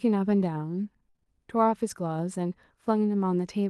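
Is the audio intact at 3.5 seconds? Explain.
Yes, the speech at 3.5 seconds is intact, with no fault at that moment.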